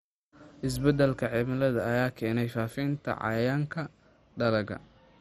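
Speech runs the whole way through with a dull, muffled top and a gurgling, granular grit, with nothing at all above about 14.6 kHz. The likely cause is heavy MP2 compression: the Layer II encoder divides the audio into 32 equal sub-bands and, starved of bits, switches the upper ones off and quantises the survivors coarsely, a pattern that fits a rate of around 56 kbps.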